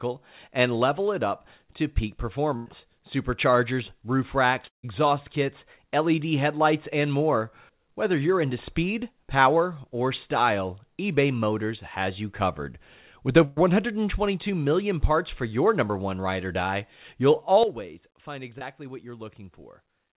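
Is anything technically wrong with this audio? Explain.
Yes. There are four kinds of fault: two bursts of packet loss, a long network dropout, a sudden gain jump and a short concealed packet loss. The sound is confined to the telephone band, with nothing above 4 kHz, which fits a G.711-type call codec.

Burst of packet loss, 2.56–2.68 s and 13.45–13.58 s: the first comes right after "it up to peak". About 100 ms and 120 ms of audio never arrived. The receiver extended the last sound as a fading buzz or hiss, then resumed with that stretch skipped. On a spectrogram, harmonics smear flat and fade.

Long network dropout, 4.68–4.85 s, just after "superchargers roof racks": this is likely a dropout in the network. About 160 ms is lost. A brief fading continuation gives way to roughly 130 ms of near-silence. The waveform collapses to a flat line, and the spectrogram shows a blank column before the audio restarts.

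Sudden gain jump, 17.63 s to the end, right after "ride or die you'll": the level drops by about 12 dB from one sample to the next, likely a digital gain change applied without a ramp. Sound and background noise fall together. The waveform envelope steps down abruptly, and the spectrogram darkens uniformly from that point.

Short concealed packet loss, 18.58–18.63 s: about 20 ms never reached the decoder in time. The receiver filled it by extrapolating the preceding sound and then blended back, which is heard as a brief smear or wobble. On a spectrogram, it appears as a thin, slightly blurred vertical stripe.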